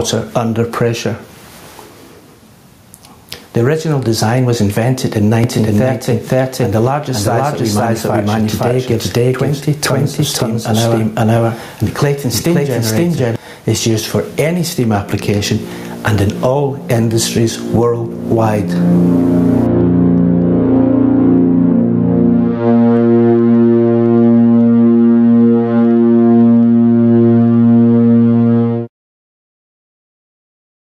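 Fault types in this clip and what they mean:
Gain pumping: The level rises and falls with the programme across the whole clip, by something around 15 dB. Quiet and loud passages sit unnaturally close in level and the result sounds squashed. This points to an input gain set far too high, with a fast limiter or compressor likely clamping it down on every peak.
Doubled audio track: From 5.44 s to 13.36 s a second, full-band copy of the sound runs about half a second behind the original at roughly the same level. It carries no reverberant tail or room colour, so it reads as a clean repeat rather than an echo, and it cuts in and out abruptly at those times. The likely cause is the same signal reaching the mix twice, once through a slower capture path.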